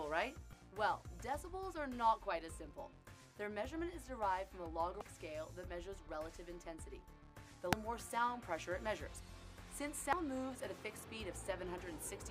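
Damaged data in a compressed stream produces brief blips at 0.53, 5.01, 7.73 and 10.13 s. At each point the decoder hit corrupted bytes, misread or discarded those frames, and lost sync until it found the next valid frame header, leaving a short glitch in the audio.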